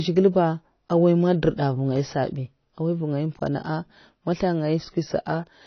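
Throughout the speech, the signal has most likely passed through AAC compression at a low bitrate. The sound fits AAC-LC running near 24 kbps, where the encoder has too few bits for the full spectrum, so it discards the top band and quantises what remains coarsely. Nothing is present above 6.6 kHz, leaving the voice dull and muffled. The codec damage is plainly audible as a smeared, warbling texture, with sibilants turned fizzy.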